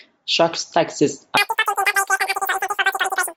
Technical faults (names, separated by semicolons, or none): wrong sample rate